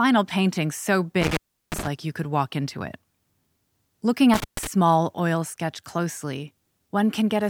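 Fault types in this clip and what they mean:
Intermittent contact: A loose cable or plug briefly loses its connection, so the signal path opens and closes. Here it happens twice. From 1.20 to 1.88 s the sound drops out for about 353 ms, with crackle as the contact breaks and remakes. From 4.34 to 4.67 s a shorter dropout of about 134 ms follows, again framed by crackle. While the line is open, faint hiss remains in place of the sound.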